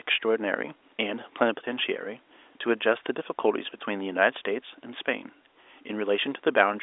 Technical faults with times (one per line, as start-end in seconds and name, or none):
none